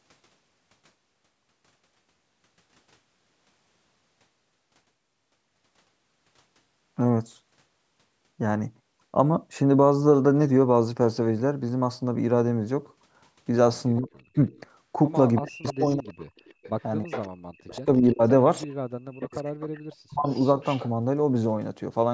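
From 13.98 to 14.51 s the speech is suppressed in double talk. The voice dips sharply, by about 40 dB at its deepest, likely because the echo canceller clamped down while both sides spoke. On a waveform this is a pinched, near-flat gap. Overlapping it, from 14.34 to 14.6 s, a faint echo leak appears, about 35 dB below the speech. It is likely uncancelled loudspeaker pickup returning 332 ms late, and shows as a weak, offset copy of the voice's harmonic pattern on a spectrogram.

From 15.35 to 20.88 s the echo leak grows stronger, about 20 dB down. It is a 332 ms delayed ghost of the voice, showing as smeared duplicate bands.

Within that stretch the voice is suppressed again at 15.41 to 16.32 s, 17.06 to 18.22 s and 19.11 to 20.27 s. The level drops by about 35 to 40 dB. On a spectrogram the energy collapses in blotchy gaps below the band edge at 8 kHz.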